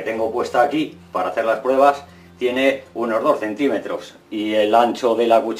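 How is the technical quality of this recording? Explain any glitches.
Nothing here trips me up at all: there are no glitches to explain, just steady, unbroken audio the whole way.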